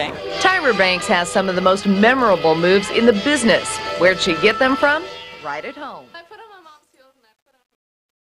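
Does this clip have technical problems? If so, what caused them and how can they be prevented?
Yes. From 4.81 s to the end at 8.38 s there's truncation distortion on the fade. As the fade-out, which starts around 5 s, pulls the level down, the tail turns gritty, and from 6.19 s to 8.38 s the grit is at its worst. The gain stage is rounding to too few bits without dither, so the quiet waveform collapses into coarse square steps. The grit points to something like an 11-bit path. Run fades at higher resolution and add dither whenever you reduce bit depth.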